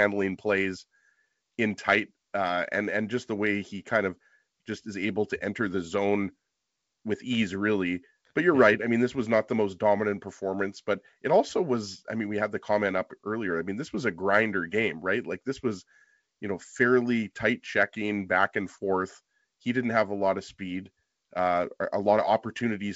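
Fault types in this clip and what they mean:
There are no fault types in this clip.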